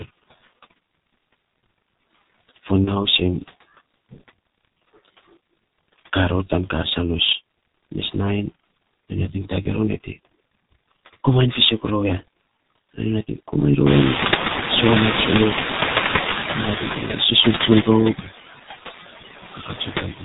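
Throughout, the speech passes through the G.723.1 codec. It is muffled and hoarse, with nothing above 4 kHz and blurred consonants. The voice model updates slowly. The heavy damage fits a low rate near 6.3 kbit/s.

Noise suppressor artifacts also run the whole way. The suppressor pulls noise-like bands down by about 15 dB, frame by frame. The background dips between phrases and swells under them.

At 2.85 s, and again at 9.62 s, there is VoIP packet loss concealed by the speech codec. Each gap lasts roughly 60 to 80 ms, which points to one lost 30 ms frame. The decoder stretches its last pitch and filter into a brief sound that fades. The voice stays weak just afterward.

Near 14 s the room noise rises by about 23 dB, to roughly 10 dB below the speech. From 19.54 s to the end there is speech cut by the noise suppressor. Under half a second of quiet speech is treated as noise and dropped by up to about 16 dB. 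It sounds swallowed and faint.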